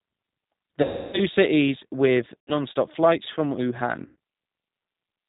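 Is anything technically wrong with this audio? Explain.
Yes. The speech has been carried through a G.729 codec for its whole length, and packet loss concealed by the speech codec interrupts it three times.

The G.729 codec compresses the signal into a vocal-tract filter, a pitch predictor and a few pulses per frame, which fits a low-rate coder around 8 kbit/s, likely the G.729A variant. Nothing above 4 kHz survives. The damage is plainly audible: the speech sounds dull, slightly rough and synthetic.

VoIP packet loss concealed by the speech codec occurs from 0.83 to 1.21 s, 2.40 to 2.54 s, and 4.06 to 4.16 s, covering about 300 ms, 80 ms and 100 ms of lost audio. With the packets missing, the decoder kept repeating its last pitch and filter settings at falling gain. In the longest gap at 0.83 s, the sound is stretched out and fades before the speech weakly recovers.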